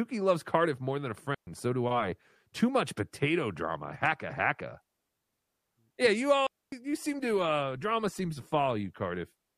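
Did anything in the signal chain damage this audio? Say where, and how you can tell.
Yes, two digital wireless dropouts on the radio link at 1.35 to 1.47 s and 6.47 to 6.72 s: clean, noise-free holes where the receiver muted after losing data.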